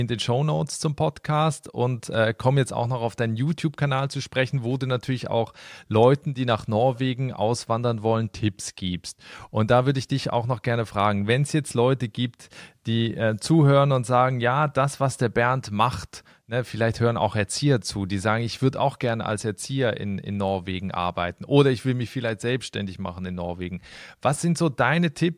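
No technical faults can be heard anywhere in this recording.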